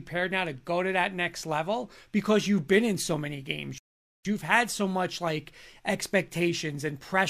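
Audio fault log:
3.78–4.25 s, playback stall: the speech cuts off in mid-flow and the output drops to silence for about 0.47 s before the speech carries on. The gap is a hard dropout rather than a fade, with no noise or tail filling it. The likely cause is the player starving for data or having its output thread blocked briefly, so nothing reached the device until buffering or scheduling recovered.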